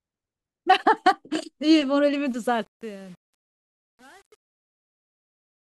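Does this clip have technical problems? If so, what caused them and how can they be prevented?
Yes. The speech carries truncation distortion on a fade from 2.26 s to the end at 5.65 s. It is worst from 2.55 s onward, as the fade-out sinks toward silence. The gain stage keeps too few bits and adds no dither, so the quietest stretch collapses into coarse square steps, which fits an 8-bit path. What marks it out from noise-gate chatter is that the grit follows the falling level itself rather than switching on and off at a fixed threshold. To prevent it, run fades at high resolution and add dither whenever the word length is reduced.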